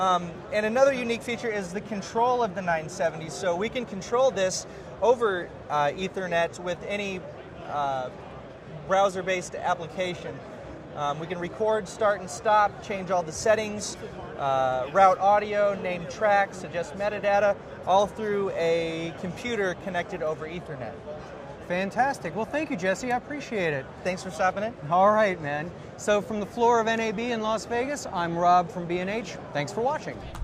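Nothing in the audio stood out as a technical problem on listening.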